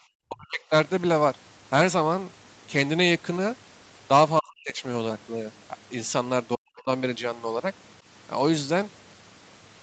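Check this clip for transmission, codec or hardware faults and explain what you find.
The speech drops out three times in a way that points to speech suppressed in double talk, at 0.28–0.61 s, 4.39–4.83 s and 6.55–6.89 s. Each time the level falls by roughly 35 to 40 dB for around a third of a second. The likely cause is an echo canceller that cannot tell the near talker from loudspeaker echo while both sides speak, so it attenuates everything. On a waveform these show as sudden near-silent notches. On a spectrogram they appear as vertical gaps cut through the speech energy, and each gap sits below the 8 kHz ceiling set by the call path.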